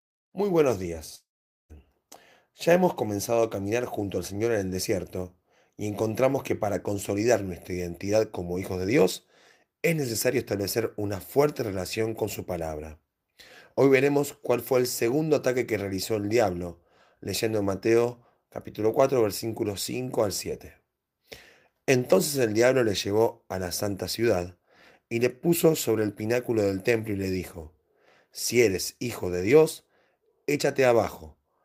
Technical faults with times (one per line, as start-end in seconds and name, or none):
1.15-1.72 long network dropout